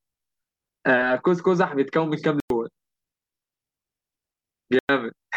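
At 2.40 s and again at 4.79 s the speech cuts to silence for about 0.1 s, likely a Bluetooth dropout. Unlike a pause, it resumes later, as if it played on.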